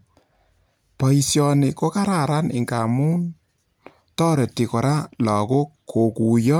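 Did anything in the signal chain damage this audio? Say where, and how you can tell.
No, nothing at any stage of the chain shows up as damage in this speech recording.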